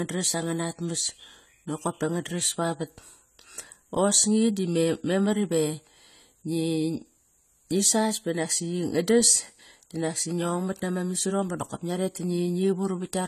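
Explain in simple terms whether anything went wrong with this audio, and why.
The speech sounds dull and smeared throughout, with nothing above 14 kHz. This likely comes from heavy AAC compression, which throws away detail to save space.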